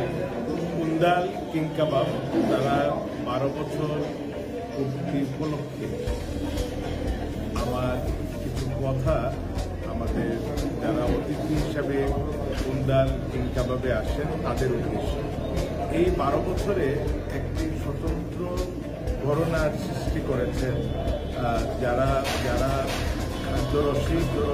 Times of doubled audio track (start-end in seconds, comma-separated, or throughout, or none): 22.33-24.54